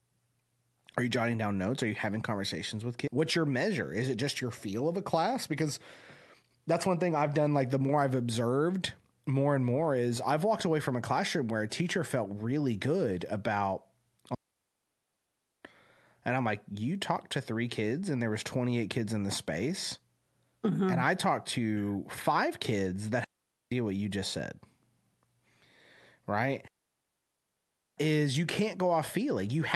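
At 3.07 s, right after "you having conversations with", a skip ahead drops about a second of speech, splicing both sides together with no gap.

Jitter buffer speed-up follows from 3.17 to 5.62 s at 106% and from 6.42 to 7.98 s at 108%, ending before "I've observed more and". In each stretch the receiver trims around 150 ms of pitch periods to shed excess buffered delay, so delivery sounds hurried without any change in pitch.

Digital wireless dropouts occur at 14.35–15.65 s after "felt really good about", at 23.24–23.72 s, and at 26.68–27.98 s. Each time the receiver mutes on data loss for 1.3 s, 0.48 s and 1.3 s, leaving clean silent holes with no noise bursts.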